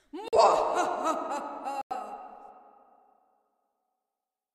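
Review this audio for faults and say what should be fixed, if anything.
Two corrupt frames muted events cut into the sound. The first runs from 0.28 to 0.38 s, a gap of about 96 ms that fits a single lost frame. The second runs from 1.80 to 1.97 s, about 168 ms, which points to several consecutive frames. Each gap starts abruptly as pure silence. Damaged compressed data was rejected by the decoder, and the player filled the slot with nothing. Timing stays intact afterwards. Protect the stream with checksums and error correction, or use packet-loss concealment instead of muting.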